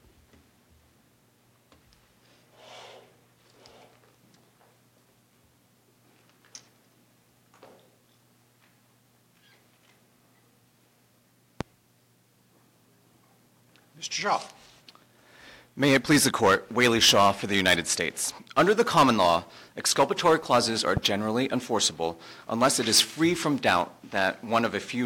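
At 11.61 to 11.64 s and again at 20.97 to 21.00 s a loud pop breaks through, likely a voltage pulse from a plug, switch or static. The first pop stands well above the audio and the second somewhat less. Each is a single thump while the sound continues underneath, unlike a dropout.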